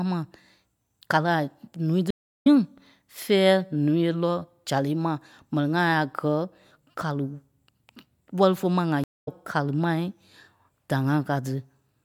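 Stream reconnect at 2.10 s, after "kàli a ǹúui", and at 9.04 s, after "wɛ́li fé ma ŋa". The connection drops, the speech goes silent for 0.35 s, then 0.23 s, and a fresh decoder resumes it. The restart lands about 0.2 s, then about 0.3 s, further on, so a piece of speech is skipped each time. The second gap ends just before "kàli mai".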